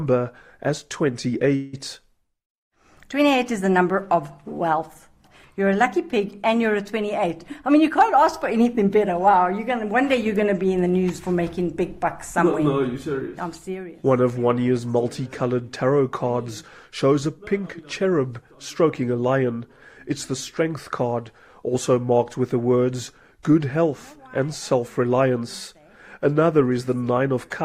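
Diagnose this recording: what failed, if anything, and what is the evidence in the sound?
A call audio freeze occurs from 1.55 to 1.75 s. For about 176 ms, the last sound is stretched into a fading buzz or hiss. Then it resumes exactly where it stopped. Nothing is lost; a gap is inserted. The likely cause is delayed network packets emptying the jitter buffer.

A jitter buffer speed-up runs from 7.51 to 9.36 s. The sound plays at 110% speed with its pitch unchanged, so it feels hurried. The receiver cut many pitch-period slices, roughly a fifth of a second in total, to shed excess buffered delay.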